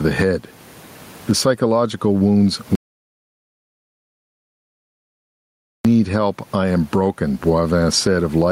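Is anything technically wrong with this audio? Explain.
Yes, there are two clear problems in this speech clip.

Gain pumping runs the whole way through. The background noise sits about 38 dB below the speech. The level swing is around 20 dB. The likely cause is input gain set far too high, with a fast limiter or compressor clamping down on every peak. That leaves the speech squashed and flat.

There's also an audio dropout to silence from 2.75 s to 5.85 s, so roughly 3.1 s of speech is simply gone. The sound cuts out mid-flow and returns mid-flow. The gap is dead silence, with not even room tone left, which tells you the recorder kept writing silence while it had no input. The likely cause is a lost input: a device dropping off, a failed link, or a stray mute.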